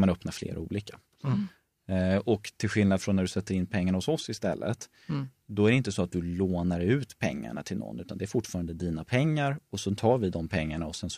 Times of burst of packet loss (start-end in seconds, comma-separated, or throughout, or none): none